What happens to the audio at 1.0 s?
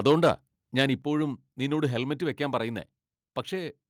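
At 1.02 s the whole speech signal, voice and background together, drops by about 4 dB in one step, likely a microphone volume stepped down by call software reacting to a loud input.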